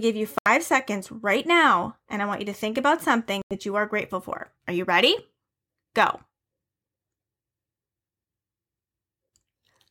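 Bluetooth dropouts occur at 0.38 to 0.48 s and again at 3.42 to 3.56 s, where the speech cuts to silence for roughly 76 ms and then 91 ms. The cause is likely audio packets failing to reach the headphones in time and being discarded. Each gap has abrupt edges or a fade of a few milliseconds, and when the sound returns it picks up further along, as though it had kept playing through the hole, so those fragments are simply missing.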